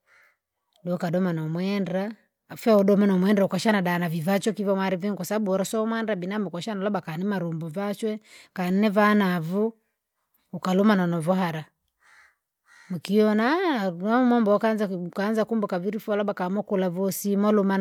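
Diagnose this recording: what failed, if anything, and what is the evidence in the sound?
Nothing failed in this recording, and the sound carries no evidence of a fault at any stage.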